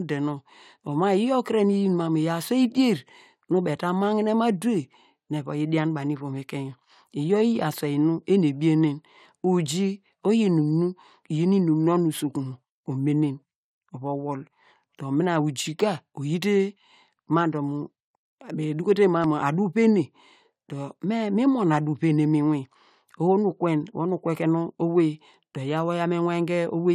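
Audio missing between chunks at 19.24 s: processing, likely in 10-second chunks, dropped about ten milliseconds at the join, heard as a tiny skip.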